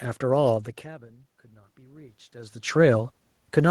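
Automatic gain rising, from 0.47 s to 3.04 s: the speech level at the microphone fell by about 24 dB as the talker moved away, so the gain control slowly added about 6 dB, lifting the voice and the room noise together in a gradual swell.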